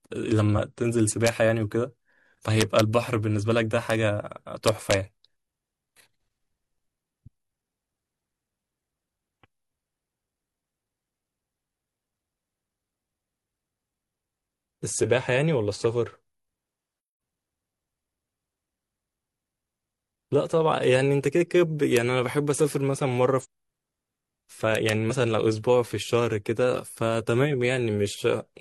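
A gain or summing stage with no saturation lets loud speech peaks run past the largest integer, so instead of being limited they wrap to the opposite sign and swing across the full range. This integer overflow is heard as sharp, violent cracks on loud syllables, harsher than clipping: at 1.27 s, from 2.61 to 2.80 s, at 3.90 s, from 4.68 to 4.94 s, at 21.97 s, and from 24.75 to 24.89 s. The peaks pass the limit by at most about 2 dB.

Damaged data in the compressed stream makes the decoder misread frames, lose sync and hunt for the next valid header. Each lasts about 50 ms and is heard as a brief chirp or blip: from 23.40 to 23.46 s, from 25.07 to 25.12 s, and from 28.10 to 28.15 s.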